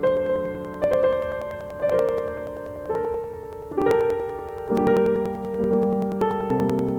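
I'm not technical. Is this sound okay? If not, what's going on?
No. The music was likely captured twice, a doubled audio track: a second copy, just as loud, plays about a second behind the first throughout.

Separately, periodic USB or driver dropouts skip a few thousandths of a second every 0.096 s, from 0.07 s to 6.89 s, producing about seventy steady ticks.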